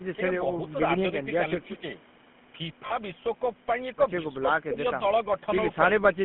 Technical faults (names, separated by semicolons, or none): GSM full-rate codec; lost GSM frames